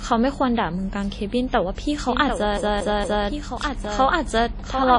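Throughout the speech there is a ringing, washy quality, with a hiss that swells and falls along with the talking and nothing at all above 10.1 kHz. These are plainly audible codec artefacts, likely from WMA compression at a low rate, which fits about 32 kbps. The transform encoder spreads its quantisation noise over tens of milliseconds around each sound and discards weaker spectral detail, which explains the smeared, breathing texture and the missing top end.

At 2.08 s a second copy of the speech abruptly joins and runs to the end. It trails the original by roughly 0.7 s and sits about 5 dB quieter, full-band and dry, with no decay or room colour. This doubled audio track is likely the same material mixed in twice, either captured again through a slower path or left as two out-of-step copies by an edit.

From 2.57 s to 3.27 s the audio stutters quickly and evenly, like a skipping disc. 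A 232 ms stretch plays three times, with a brief mute at each jump back. This is the CD stuck on one turn pattern: a scratch throws the laser back one track at the same point on every rotation of the disc, so the same short span repeats before playback moves on.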